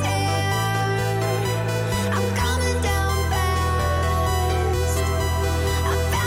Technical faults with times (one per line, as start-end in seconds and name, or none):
none